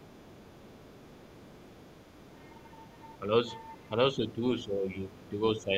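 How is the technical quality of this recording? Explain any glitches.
The recording has two related faults from the echo canceller on a call. Both affect the speech repeatedly.

Other side's voice leaking through runs from 0.0 to 3.19 s, again from 3.66 to 3.89 s, and briefly at 5.24 to 5.31 s. A second, faint voice sits well under the main speech, roughly 30 dB down. The likely cause is a loudspeaker playing the other party into the microphone. The echo canceller left a residue of it in the signal.

Speech suppressed in double talk occurs at 3.2 to 3.31 s, 4.15 to 4.41 s, 4.65 to 4.88 s, 5.06 to 5.4 s and 5.58 to 5.72 s. In each spot the main voice briefly ducks. The dips start mild and deepen to roughly 15 dB around 5.1 to 5.4 s. This is likely the echo canceller reacting to both sides talking at once. Unable to separate them, it turned the local talker down as well.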